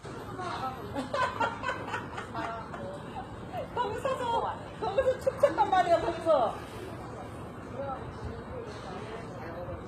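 A recording of sounds carries plainly audible damage from what is likely HE-AAC compression for its whole length, at a rate that fits roughly 20 kbps. The treble stays bright up to a hard ceiling near 14.9 kHz, but it is rebuilt by copying lower bands upward, so high detail sounds gritty and metallic and fails to line up with the body of each sound. Ordinary low-bitrate coding would instead leave the top end dull or swirling.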